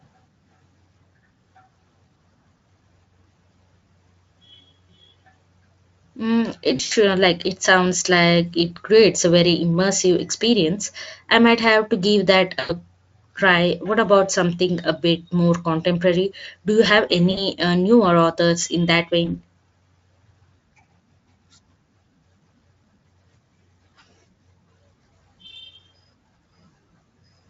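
VoIP packet loss concealed by the speech codec occurs at 6.75–6.92, 12.59–12.72, 17.31–17.43 and 19.25–19.42 s. The decoder extrapolates lost audio into a buzzy tone or coloured noise that fades, about 120, 100, 60 and 20 ms, with weak sound lingering afterward.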